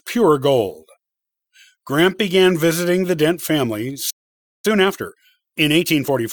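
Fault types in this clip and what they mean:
playback stall: The speech stops in mid-flow at 4.10 s and stays silent for about 0.54 s, until 4.65 s. The likely cause is a player that ran out of data or had its thread blocked. Sound then resumes.
time-compressed catch-up: From 4.65 s to the end, the speech runs 1.15 times faster at its normal pitch. The player is shrinking its backlog after the stall. It cuts out small pieces and cross-fades the joins, so the delivery sounds hurried.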